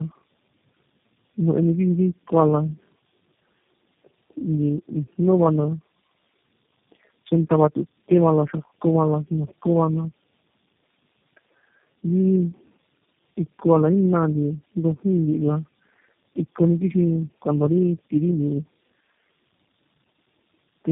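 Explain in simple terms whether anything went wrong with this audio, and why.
Something did go wrong, and it lasts the whole clip: tandem speech coding. The speech sounds rough, muffled and warbly, with nothing above about 3.6 kHz. That points to the call passing through roughly four separate phone-style speech coders in a row, with the audio decoded and squeezed again at each hand-over. Every coder had to work on the previous coder's damaged output, so the small errors piled up into a harsher result than any single link would give.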